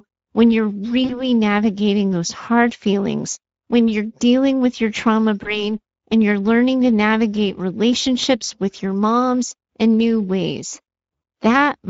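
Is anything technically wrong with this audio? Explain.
Yes. Two faults can be heard: coding damage that runs through the whole speech clip, and two short dropouts that the decoder papered over.

Throughout, the speech sounds grainy, hoarse and noisy, with a rough edge that is plainly audible. This is Speex codec damage, and the degree of it fits Speex running at a middle setting of about 16.8 kbps. Speex is a CELP coder that models the voice with a filter driven by an excitation signal. At this rate the excitation gets too few bits to carry its fine detail, and that shortfall comes through as a rasping texture over the voice.

From 1.05 to 1.24 s, and again from 5.43 to 5.75 s, the speech briefly smears into a drawn-out buzzy tone or coloured noise that fades and then takes a moment to recover. This is VoIP packet loss concealed by the speech codec. In the first event about 40 ms of audio went missing, which fits two lost 20 ms frames. 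In the second about 20 ms went missing. Each time, the decoder repeated its last pitch and filter state with falling gain. Because every frame builds on the one before, the voice stays weak and coloured well after the loss itself, which is why each disturbance lasts roughly 0.2 to 0.3 s.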